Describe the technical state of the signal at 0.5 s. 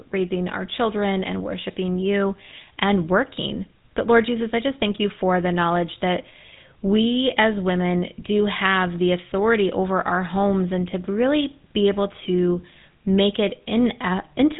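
At 0.5 s the speech is passing through the GSM full-rate codec, and this fault spans the whole clip. The codec models the vocal tract as a filter. It then drives that filter with a sparse, regularly spaced pulse excitation that keeps only every third sample, at a rate that fits 13 kbps. The result is a plainly audible buzzy, gravelly roughness. On a spectrogram the energy stops sharply near 3.8 kHz and the harmonics look coarse and smeared.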